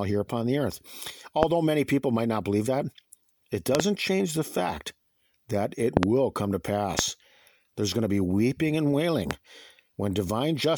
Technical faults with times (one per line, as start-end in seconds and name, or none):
1.43-1.45 loud pop
3.75-3.82 loud pop
5.97-6.05 loud pop
6.99-7.01 loud pop
9.31-9.33 loud pop